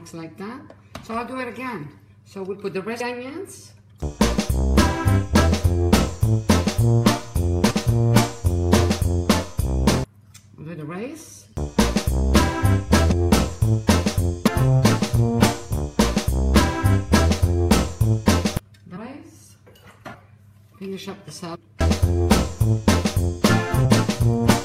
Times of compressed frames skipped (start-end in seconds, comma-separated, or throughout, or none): 13.10, 14.46, 21.54